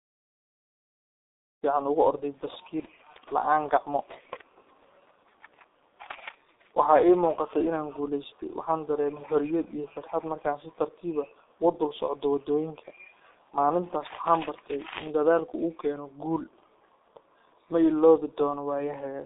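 Throughout, the speech carries G.723.1 codec damage. The band runs from about 250 Hz to 3.7 kHz, with nothing above 3.8 kHz. Coarse 30 ms frames and a slow voice model leave the speech muffled and hoarse, with blurred consonants. The heavy damage fits a bitrate near 6.3 kbit/s. The fade-in at around 1.5 to 1.64 s stays smooth.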